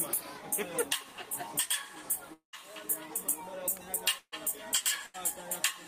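The audio most likely suffers a long network dropout from 2.33 to 2.59 s: about 200 ms never arrived, so the last sound is stretched into a fading buzz or hiss that gives way to roughly 110 ms of near-silence before the audio resumes further on. Two bursts of packet loss follow, at 4.18 to 4.34 s, losing 140 ms and ending in a brief silent stretch, and at 5.06 to 5.16 s, losing 80 ms. In each case the receiver held the previous sound as a dwindling buzz or hiss before skipping ahead past the missing part.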